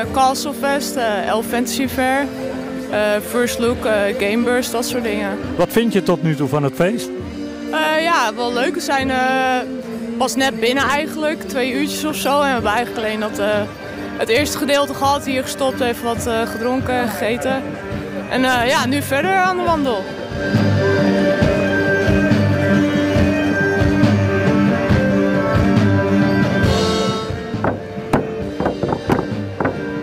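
No technical faults are audible anywhere in this audio.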